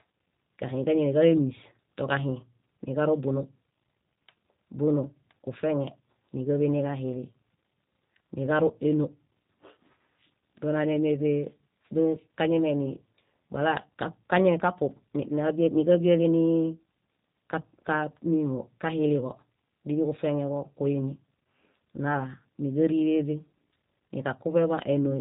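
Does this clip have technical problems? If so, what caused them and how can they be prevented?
Yes. G.729 codec coding runs throughout this speech: pulse-based resynthesis leaves it rough and synthetic, nothing passes above 3.8 kHz, and the damage fits an 8 kbit/s stream. Prevent it by negotiating a wideband codec such as G.722 or Opus.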